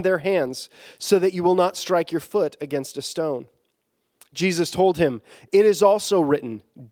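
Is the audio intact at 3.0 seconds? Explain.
Yes, at 3.0 seconds the speech plays through intact, with no dropout, click, glitch or other fault to be heard at that point.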